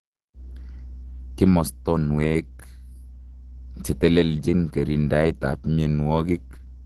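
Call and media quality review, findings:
Opus compression, full clip, 0 to end. Speech muffled and hoarse; damage plainly audible. Likely cause: Opus in hybrid speech mode at a low rate, roughly fitting 16 kbps, filling starved bands with noise. Spectrogram: hard ceiling at 12.3 kHz, nothing above; upper bands smeared, speckled texture instead of clean harmonics. Waveform: no clear signature.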